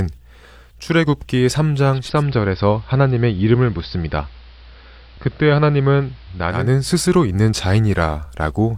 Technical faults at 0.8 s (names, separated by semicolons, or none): none